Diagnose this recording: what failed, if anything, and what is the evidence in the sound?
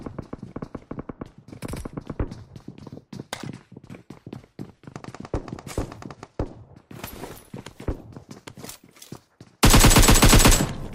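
Nothing failed here as far as my ears can tell, since every stage from capture through to playback seems to have done its job and there's no evidence in the sound pointing to trouble anywhere along the chain.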